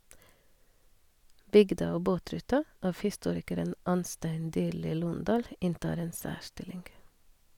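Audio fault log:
No technical faults can be heard in this speech recording; the signal stays steady and continuous throughout.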